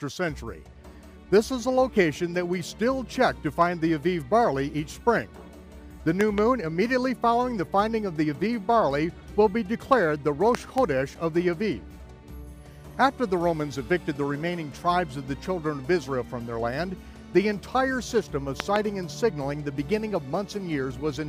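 A sudden voltage step, likely from a plug, switch, static discharge or driver glitch, breaks into the signal path three times, and each time the circuits after it shape it into a loud pop heard as two sharp hits in quick succession. They fall at 6.21 to 6.40 s, 10.55 to 10.80 s and 18.60 to 18.78 s, rising roughly 15 dB, 15 dB and 20 dB above the surrounding sound, which carries on underneath.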